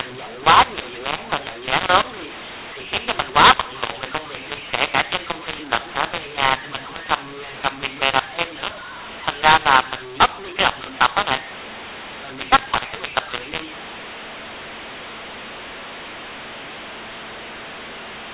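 A-law telephone audio is decoded as mu-law throughout: a mu-law and A-law mix-up that scrambles levels, making the speech harsh and distorted and filling pauses with noise.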